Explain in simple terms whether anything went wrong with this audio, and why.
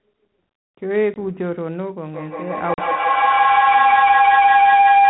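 Two things went wrong, and both are call problems.

The first is packet loss on an ADPCM call. At 1.14 s, about 20 ms of sound drops out, and at 2.74 s about 40 ms more is gone. Each gap is filled with silence and has sharp edges. This codec guesses each sample from the ones before it. After a gap, the receiving end has lost track of those guesses. So the sound comes back slightly distorted, then settles within some tens of milliseconds.

The second is feedback howl. It starts at 2.14 s and runs to the very end. Two devices in the same room were on the call. Sound from one speaker went into the other microphone and came back louder each time. Instead of fading, the repeats grew and narrowed into a whistle-like tone, roughly 700 Hz. Each trip around the loop takes about 150 ms, and the howl ends up clearly louder than the speech. Muting one device would have broken the loop.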